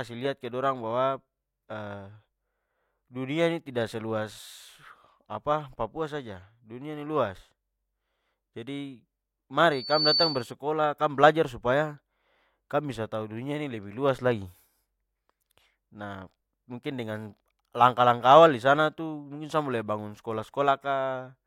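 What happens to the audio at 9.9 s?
At 9.9 s the speech is caught in a loudspeaker feedback squeal, running from 9.71 to 10.52 s. A microphone is hearing the loudspeaker it drives. At one frequency the loop gain tops unity, so that tone feeds on itself. Here it sits at 4.5 kHz. It swells over roughly a third of a second into a piercing whistle. At its peak it stands about 5 dB above the speech.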